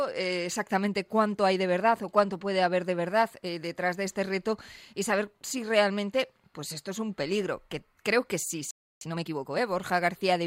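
A playback stall hits at 8.71 s: the sound cuts off in mid-flow and the output stays silent for about 0.31 s, until 9.01 s. The likely cause is the player running out of buffered data, or its output thread being held up, so nothing reached the output for that stretch. The gap is long enough to hear as a clear dropout rather than a click, and the sound then resumes.

Time-compressed catch-up follows straight after, from 9.01 s to 9.61 s. To work off the backlog built up during the silence, the player trims out small slices and cross-fades the remaining pieces together, running the material at 1.5 times normal speed while keeping the pitch unchanged. The result is a rushed, hurried stretch lasting about 0.6 s.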